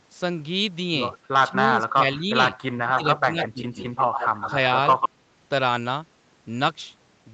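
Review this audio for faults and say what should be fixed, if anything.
Speech suppressed in double talk occurs at 1.49–2.29 s, 2.82–3.03 s and 3.21–3.79 s. The level dips by about 20 dB in the first two and about 10 dB in the third. These dips are likely an echo canceller ducking the near talker while the far side was also active. To prevent it, use a canceller with better double-talk detection, or headsets.

An echo leak appears at 2.98–3.19 s, 3.42–3.49 s, 3.78–4.51 s and 4.94–5.09 s. Each is a copy of the sound trailing by a fixed 142 ms. The first three sit about 10 dB below the speech, and the last is roughly as loud as the speech itself. This is likely loudspeaker pickup that the far end's canceller failed to remove. Unlike room reverberation, it is a discrete repeat at a constant delay rather than a smooth decaying tail. To prevent it, the far end should lower loudspeaker volume or use a headset.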